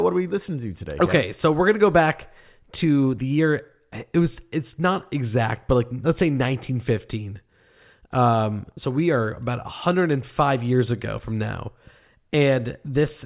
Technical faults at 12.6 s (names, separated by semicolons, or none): none